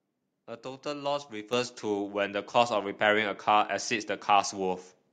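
At 1.53 s the speech and the background jump up together by about 7 dB. This is a microphone volume stepped up: the input gain was raised in one step.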